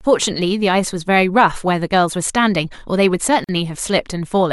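At 3.44 s the speech stops dead for about 45 ms and resumes at 3.49 s, a gap at a join of encoded pieces. The audio was encoded in sections roughly 4 s long and stitched together without trimming, so the encoder's start-up delay and last-frame padding leave silence at the seam. Unlike a packet dropout, nothing is missing: the speech picks up exactly where it broke off, and the gap's edges are softened by the codec rather than clicking.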